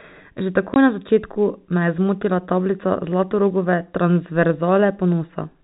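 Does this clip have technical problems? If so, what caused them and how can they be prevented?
Yes. Packet loss filled with silence at 0.74 to 0.76 s cuts a 20 ms hole with hard edges, consistent with one lost packet, just before "na začetku me je". Packet loss concealment and jitter buffering would prevent it.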